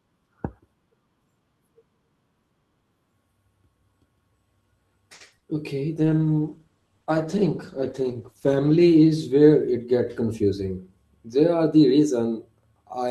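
At 5.13 s a packet arrived late and the jitter buffer ran dry, causing a short stall from a late packet. The receiver held the last sound for 70 ms until the packet turned up, then carried on with nothing lost, leaving the playback 70 ms further behind.

From 5.26 to 5.46 s a burst of packet loss follows. Several packets in a row were lost, so the receiver extended the last sound and faded it down. About 60 ms of the speech is gone, heard as a held, dimming sound before the audio resumes further along.

Inside that stretch, from 5.38 to 5.44 s, there is also a short concealed packet loss. 40 ms never reached the decoder in time, and the receiver patched it by continuing the preceding sound, which gives a brief smear where a quick consonant can disappear.

From 6.0 to 10.26 s a call bitrate drop sets in. The bandwidth estimate fell and the encoder went from 48 to 13 kbps, staying at the lowest rate for 2.72 s. 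The speech turns coarse, watery and dull, with the highs trimmed away.

From 9.98 to 10.68 s, overlapping the end of that drop, a jitter buffer speed-up occurs. The buffer held more audio than its target, so the receiver removed small pitch-period slices, about 50 ms in total. The speech runs at 107% with unchanged pitch and sounds slightly hurried.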